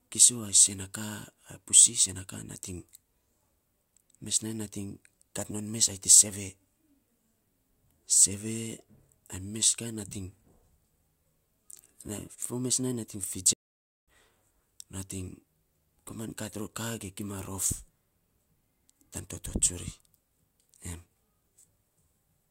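At 13.53 s, speech stops mid-flow for 0.54 s of silence: a playback stall, likely a starved player, unlike a natural pause.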